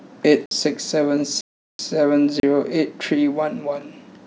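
Speech that drops out abruptly three times, as the sound cuts to nothing and snaps back without any fade. The dropouts are at 0.46 to 0.51 s (about 55 ms), 1.41 to 1.79 s (384 ms, a short hole), and 2.40 to 2.43 s (32 ms, closer to a pop). Each is a block of digital silence, where samples were replaced by zeros because the output buffer wasn't filled in time or a calculation produced invalid values.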